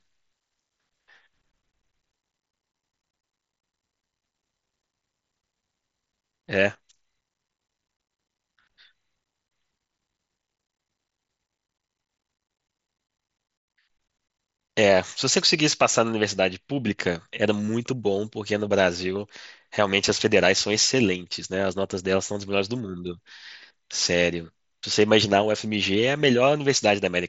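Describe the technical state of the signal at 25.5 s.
At 25.5 s the audio is intact, with no fault present, the speech carried through the mSBC Bluetooth headset path with its usual light codec character and nothing above about 7.7 kHz.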